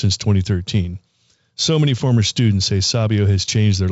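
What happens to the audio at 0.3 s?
Nothing goes wrong at 0.3 s: the speech there is intact, carried through the G.722 wideband telephone coding with its usual band limit, with no content above about 7.7 kHz and a light hiss from the coding.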